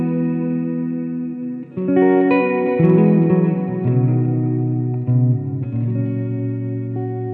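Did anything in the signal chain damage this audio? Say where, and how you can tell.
Yes. Hard clipping from 2.84 to 2.95 s, overdriven by about 1 dB at a converter or format stage. Peaks are cut flat, adding brief high-frequency crackle.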